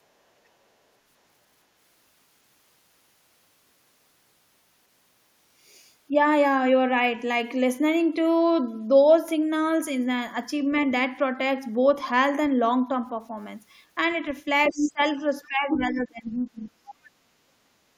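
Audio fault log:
14.69–14.92 s, 15.43–15.48 s, 15.73–16.01 s and 16.89–16.95 s, other side's voice leaking through: a second voice comes through in short scraps. The first one is roughly as loud as the talker, the one at 15.73 s is only slightly lower, and the brief bits at 15.43 s and 16.89 s are much fainter, down around 20 to 30 dB. This is likely far-end audio from the loudspeaker that the echo canceller didn't fully remove from the mic.
14.70–15.24 s and 15.48–16.84 s, speech suppressed in double talk: the talker's level dips hard. The drop is about 20 dB in the first stretch and around 25 dB in the second. Together they cover a little under half a second and roughly a second and a half. With both sides talking, the echo canceller likely couldn't tell the talker from the echo and pulled everything down together.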